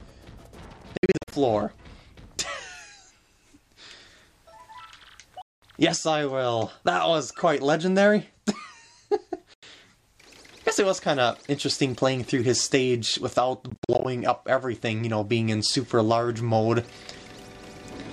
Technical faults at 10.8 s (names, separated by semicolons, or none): none